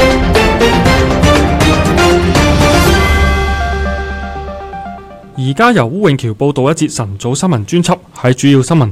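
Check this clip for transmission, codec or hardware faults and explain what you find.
One fault: hard clipping runs through the whole clip. The signal is driven about 1 dB past the ceiling of some stage, so roughly one percent of samples have their peaks sliced flat. Those flat tops add high harmonics, heard as brief crackle on the loudest moments rather than continuous fuzz.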